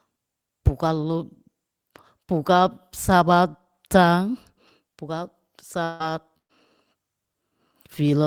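At 5.83 s the speech cuts out and a smeared continuation of the last sound fills roughly 160 ms, buzzing or hissing on without any true silence until about 6.03 s, when the speech picks up further on with that stretch gone. That's most likely a long network dropout.

Right near the end of that gap, from 6.00 to 6.02 s, there's a lost packet rebuilt from error correction. It's about 20 ms of audio played from a low-bitrate backup copy, so there's no hole, just a brief rougher, grainier patch.

Then from 6.38 to 6.52 s comes a burst of packet loss. About 120 ms never arrived, and the receiver stretched the last sound and faded it down, leaving around 100 ms of near silence before the audio resumes with the missing part skipped.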